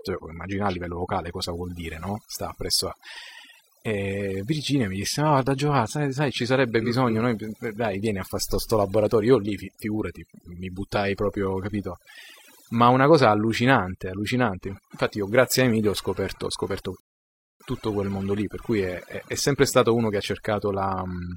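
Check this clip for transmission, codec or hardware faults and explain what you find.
Three faults are present: overdone noise removal across the whole clip, computer activity noise in the later part, and a rebuffering stall inside that noisy stretch.

The overdone noise removal runs from start to finish. The reduction was set too aggressively, so any frequency band sitting close to the estimated noise floor is pulled far down or gated off entirely. Quieter components of the speech fall below that threshold and vanish with the noise. The result is a near-silent background scattered with twinkling, tonal specks.

Computer activity noise appears from 14.66 s to 19.41 s. A buzzing, chirping texture pulses at around 150 Hz, sitting roughly 20 dB below the speech. It comes from load changes in the host machine (processor, graphics or mouse activity) disturbing the ground shared with the audio circuitry. 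It tracks that activity rather than the speech, so it starts and stops independently of what is being said.

The rebuffering stall falls at 17.00 s and lasts until 17.60 s. Playback drops to silence for about 0.6 s and then picks up exactly where it left off, with nothing missing from the speech. The player exhausted its downloaded data and waited for more to arrive before continuing. Because no content is lost, the only effect is 0.6 s of added time and a hard gap.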